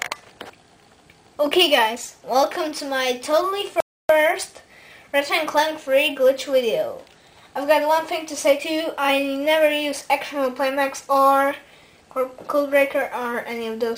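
A playback stall runs from 3.80 to 4.09 s: the audio cuts out abruptly in mid-flow and stays silent for about 290 ms before sound returns. The gap is too long and too clean to be a dropout in the source itself. It is most likely the player running short of buffered data, or its output thread being held up, so nothing reached the output until it recovered and resumed feeding samples.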